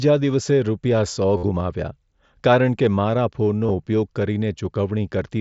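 Concealed Bluetooth headset packet loss occurs twice on the mSBC link, which otherwise carries the speech up to 8 kHz with light grain. From 1.37 to 1.43 s, 60 ms of voice packets in a row never arrive. The receiver loops the best-matching recent stretch to fill the gap, giving a held buzzy tone at full level with a slight warble as real speech resumes. At 3.65 to 3.70 s, about 38 ms of shorter losses scattered over 60 ms, the longest 22.5 ms, produce briefer patching.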